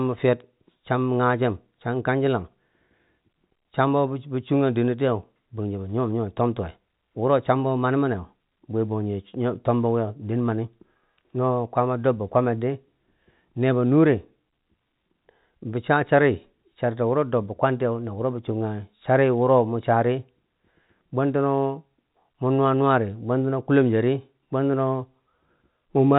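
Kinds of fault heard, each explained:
No faults can be heard in the speech. It carries the narrow band of G.711 telephone coding, with nothing above 4 kHz and only a faint noise that rises and falls with the level of the speech.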